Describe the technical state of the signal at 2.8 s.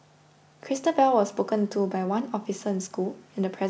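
At 2.8 s the speech comes through intact, carried by the usual call chain with its band limited to about 8 kHz and no fault to be heard at that moment.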